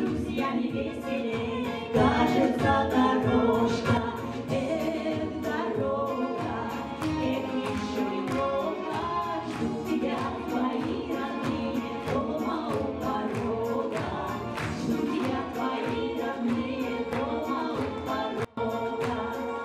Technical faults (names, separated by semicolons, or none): sudden gain jump